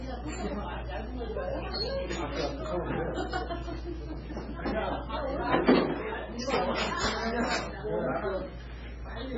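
Throughout, nothing above 7.5 kHz survives and heavy watery, swirling artefacts smear attacks, likely MP3 compression at a very low bitrate around 16 kbps.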